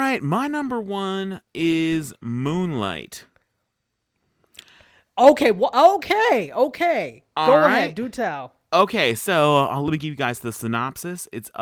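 A speech recording in which no technical fault can be heard anywhere in the signal.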